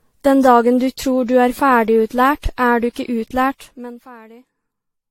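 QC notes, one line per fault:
Throughout: generation loss. The speech sounds swirly, smeared and hollow, with blurred consonant attacks and nothing above 16.6 kHz. That is more damage than a single pass at 64 kbit/s AAC-LC would leave, so the likely cause is repeated decoding and re-encoding, on the order of seven passes. Each pass quantises again on a shifted frame grid, so the noise and spectral holes from earlier passes stack up instead of cancelling.
3.48–4.15 s: zipper noise, starting right after "du ikke". The level drops by roughly 25 dB over this span, but it falls in discrete jumps, several hundred of them each second, with no smoothing between them. Every jump is a small discontinuity in the waveform and produces a tiny click. At that rate the clicks merge into a fine buzzing or zipping texture that rides on the speech for as long as the level is moving.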